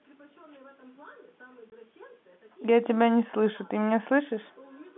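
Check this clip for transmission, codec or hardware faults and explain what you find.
One transmission fault stands out over the narrow G.711 telephone band. From 1.70 to 1.72 s the speech breaks into a short, hard-edged gap. This is packet loss filled with silence: a 20 ms stretch, consistent with one lost packet, was replaced with silence.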